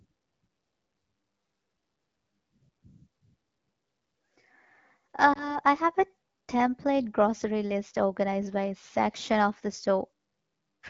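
Lost AMR speech frames at 5.33 to 5.58 s, before "I have a template": a brief dip or warble, fitting one 20 ms frame concealed by repeating the previous pitch.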